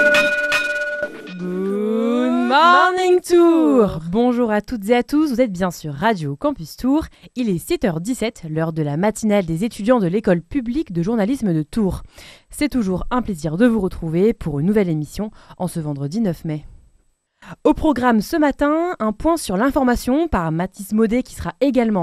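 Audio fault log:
Throughout: MP2 compression. The sound is dull and veiled, with a gurgling, granular roughness in the upper range that comes and goes as the high bands drop in and out. This is likely an MPEG Layer II encoding given too few bits, consistent with a rate near 80 kbps, so the encoder switches off whole upper sub-bands and quantises the remaining bands coarsely, leaving audible damage across the clip.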